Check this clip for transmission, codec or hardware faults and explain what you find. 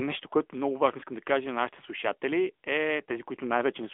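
The speech has passed through an AMR narrowband mobile codec throughout the clip. The codec resamples to 8 kHz and rebuilds speech from a vocal-tract model driven by a few pulses in each 5 ms, so nothing survives above about 3.8 kHz, and the line band runs from about 250 Hz to 3.5 kHz. The damage is plainly audible: thin, boxy telephone tone with a buzzy, synthetic edge, which fits a mid-range rate near 10.2 kbps.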